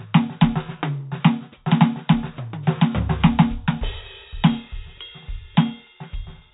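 No faults in this music.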